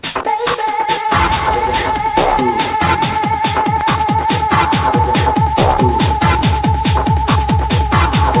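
Nothing stood out on listening to this recording.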